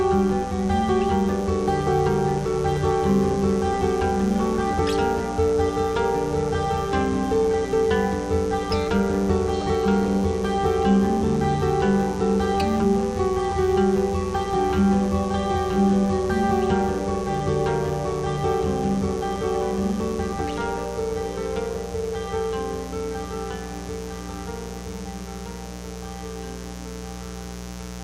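From start to finish a mains buzz runs through the sound, roughly 10 dB below it. Sharp spikes leaking in twice per 60 Hz mains cycle spread harmonics into the kilohertz range, giving a raspy edge that a smooth, low hum lacks.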